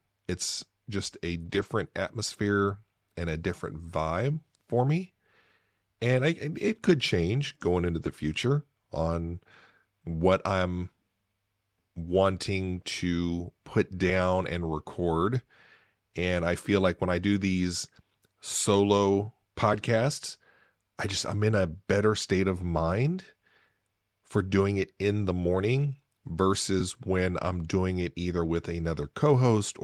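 Lost packets rebuilt from error correction at 1.41–1.63 s, after "just a", and 8.01–8.07 s, before "future on". Rougher, noisier low-bitrate copies fill them seamlessly.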